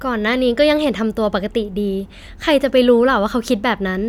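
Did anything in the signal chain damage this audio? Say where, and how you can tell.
No, nothing in the signal chain stood out as damaging this speech recording when I listened to it.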